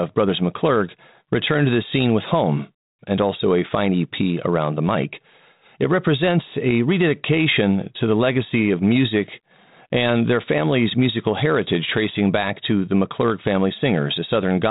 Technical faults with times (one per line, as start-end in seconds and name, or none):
none